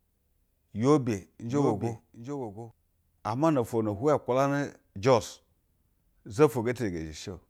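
From 1.49 s to 2.71 s, the speech picks up a doubled audio track. A second copy is likely arriving through a slower capture path and being mixed back in about 0.7 s late. The lagging copy sits around 10 dB below the original and keeps its full bandwidth, with no decay or room colour, so it reads as a quieter, dry repeat trailing the speech. It switches on and off abruptly at both ends.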